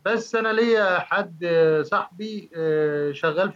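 A short speech recording with no technical faults to report: no dropouts, clipping, distortion, glitches or timing errors anywhere in it.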